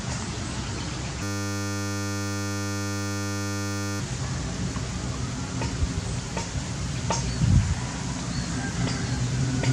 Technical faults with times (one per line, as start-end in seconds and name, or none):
1.23-4.00 system hang loop